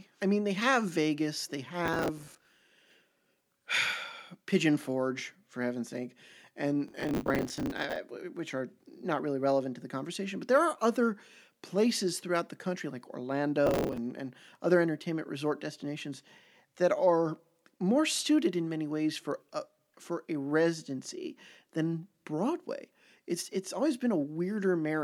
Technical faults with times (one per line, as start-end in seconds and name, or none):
1.86-2.70 processor overload crackle
6.88-7.96 processor overload crackle
13.66-13.98 processor overload crackle